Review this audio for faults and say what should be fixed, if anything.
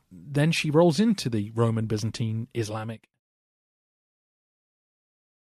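Nothing to fix: the level shifts smoothly where it changes, and the speech fades out gently from around 2.5 s to 3.2 s, with no fault heard.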